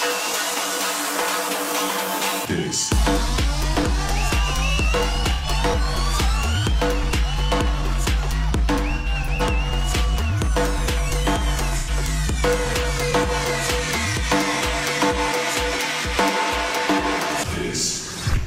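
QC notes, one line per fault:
5.34–5.46 s, AAC frame loss with concealment: about 85 ms of signal is missing, which fits a couple of lost frames. The decoder patches the gap from the previous good spectrum, giving a brief smeared, noisy patch. On a spectrogram this shows as a blurred block of flattened harmonics, and the waveform looks slightly dulled there.
8.97–9.42 s, AAC frame loss with concealment: losses are scattered across about 0.43 s, totalling about 171 ms, with the longest unbroken run around a tenth of a second. Repeated spectral guesses make the sound phasey and grainy. The spectrogram shows several smudged vertical bands.
11.78–11.90 s, AAC frame loss with concealment: another gap of about 85 ms, filled by repeating the last spectrum with randomised phase. It is heard as a short washed, noisy blip. On a spectrogram the detail smears into a uniform patch, and the waveform loses its sharp transients there.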